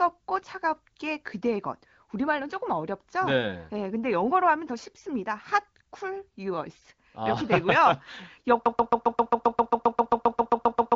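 Speech carried over an AMR wideband (HD Voice) link, with nothing above about 7.4 kHz, falls into a broken-record loop at 8.66 s: a 133 ms fragment repeats back to back through to the end, replacing the audio that should follow, likely because the player or stream stalled.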